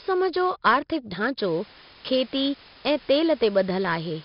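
From the start, the speech carries 4-bit ADPCM compression. Each sample is coded as a small step from a predicted value, so the error rides on the signal. Loud syllables turn gritty and sharp onsets smear. The damage is heavy. Nothing reaches above 5.3 kHz, which dulls the sound. The overall quality fits a rate near 44 kbps.

At 1.41 s, low bit depth with dither begins and runs to the end. Too few levels are left, and added dither turns the rounding error into steady white noise. It is a constant, even hiss, roughly 20 dB below the speech. The depth sounds like about 6 bits.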